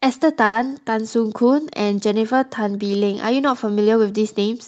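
A short stall from a late packet occurs between 0.45 and 0.69 s. A packet arrived late, the jitter buffer ran dry, and the receiver held the last sound for about 80 ms until the packet turned up, then resumed from the same point, so nothing is lost. The speech briefly sustains unnaturally, with a faint buzzy, smeared quality, and everything after it plays about 80 ms later than before.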